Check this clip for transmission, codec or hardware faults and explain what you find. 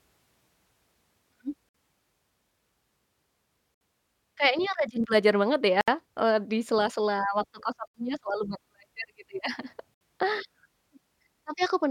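Two faults are present in this speech: a recurring gap at a join of encoded pieces, and a single repeated buffer.

Gap at a join of encoded pieces: the speech drops out at 1.69, 3.74, 5.81, 7.88 and 9.94 s, spaced 2.0 s apart. The first dropout lasts about 54 ms and the rest about 67 ms each. The audio appears to have been encoded in separate 2-second pieces and joined without removing the encoder's leading delay and final-frame padding. The result is a short hole in the sound with smeared edges. The speech then resumes where it left off.

Repeated buffer: at 5.04 s, one very short piece of audio plays twice in a row, with a hard join between the two copies. The playback device did not receive new audio in time and replayed its last buffer once. The length of the repeat fits a buffer of about 5 ms. A repeat that short is heard as a click or a brief buzz rather than a stutter. Essentially no audio is lost.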